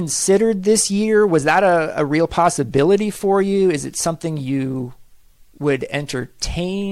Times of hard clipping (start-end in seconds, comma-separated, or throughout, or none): 1.34-1.66, 2.39-2.77